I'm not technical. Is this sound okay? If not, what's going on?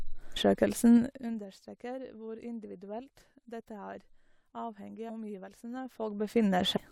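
No. There are two separate problems in this speech clip.

The first is zipper noise, and it happens twice. The volume was being turned down and later back up, but the system changed it in small jumps instead of one smooth slide. Each jump leaves a tiny click, and many in a row make a fast ticking or zipping sound on top of the voice. From 0.95 to 1.47 seconds the volume drops with about twenty ticks a second. From 5.73 to 6.57 seconds it comes back up with about ten ticks a second, so that ticking is slower.

The second is compressed frames skipped, at 6.76 seconds. The audio is stored as a series of small chunks, here about 26 milliseconds each. A run of chunks was never played, either because they were missing or because they were too damaged to read. The sound jumps ahead by about a third of a second, which points to around ten chunks lost.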